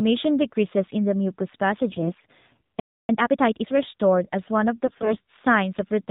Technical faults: AMR narrowband mobile codec; AMR bit errors; playback stall; time-compressed catch-up

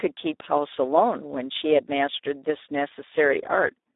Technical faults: Speex codec

